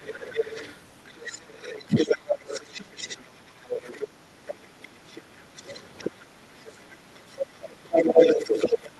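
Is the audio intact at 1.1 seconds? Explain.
No. From 0.01 to 6.1 s the other side's voice leaks through, a second talker roughly 15 dB below, not the talker's own echo, likely left by an incomplete echo canceller.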